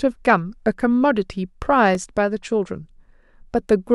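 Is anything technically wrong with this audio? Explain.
Yes. At 1.95 s the speech drops into a block of digital silence lasting 1.7 ms. The sound cuts out and back with no fade, producing a brief tick.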